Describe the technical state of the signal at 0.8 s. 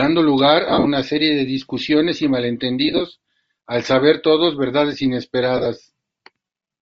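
At 0.8 s the speech falls inside a burst of lost LE Audio frames running from 0.69 to 0.87 s, just before "serie de discusiones y". Over those 165 ms about 128 ms of audio is missing in scattered gaps, the longest roughly 50 ms. The decoder patches each gap by repeating the last spectrum with randomised phase signs and fading it, so the voice turns into a hissy, smeared buzz that briefly sinks toward silence. On a spectrogram the harmonic striations dissolve into flat noise columns in stepped blocks that fit 7.5 ms frames. The waveform shows an irregular, decaying envelope.

Underneath, the whole clip carries Bluetooth LC3 compression, likely from a low-rate LE Audio link, consistent with about 32 kbps. High frequencies are coarsely quantised and partly replaced with noise fill, giving the speech a grainy, breathy edge. On a spectrogram the upper band looks patchy and speckled rather than continuous, with a soft ceiling where detail gives way to noise. 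The blocky texture fits short 7.5 ms transform frames.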